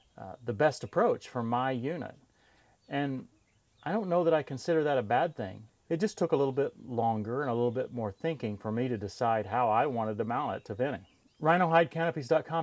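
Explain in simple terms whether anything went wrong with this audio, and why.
Nothing went wrong here: no dropouts, glitches, distortion or timing faults can be heard anywhere in the recording.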